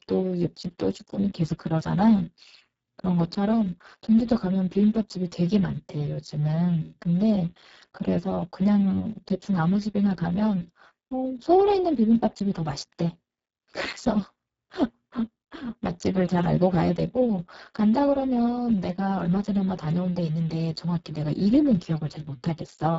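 Speech clip with Speex codec damage throughout, sounding hoarse, noisy and near-robotic, which points to a very low bitrate near 6 kbps; a spectrogram shows smeared harmonics and nothing above 7.7 kHz.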